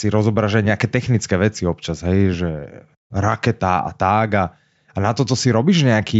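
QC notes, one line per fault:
No faults detected.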